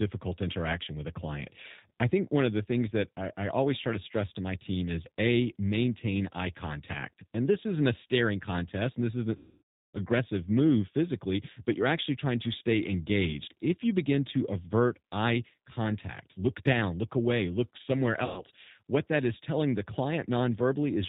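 Speech clip carried over a narrowband G.729 codec throughout, with plainly audible damage: nothing above 4 kHz survives, and the voice has the rough, slightly synthetic texture of a low-rate model that rebuilds speech from a vocal tract filter and a few pulses per frame, consistent with 8 kbit/s G.729A. VoIP packet loss concealed by the speech codec occurs from 9.37 to 9.98 s, where roughly 570 ms of signal is missing, and from 18.25 to 18.43 s, about 120 ms. In each gap the decoder extends its last pitch and filter state into a buzzy tone or coloured noise that fades, and because each frame depends on the previous one, the voice stays weakened or distorted briefly after the stream resumes.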